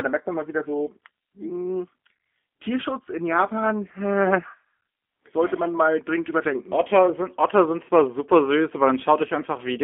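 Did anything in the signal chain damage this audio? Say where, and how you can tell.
Yes. The damage is at the codec stage, throughout the speech, from G.729 coding. The band runs only from about 250 Hz to 3.4 kHz. Speech sounds rough and synthetic, consistent with an 8 kbit/s G.729 stream rebuilding each 10 ms frame from a filter, pitch predictor and sparse pulses.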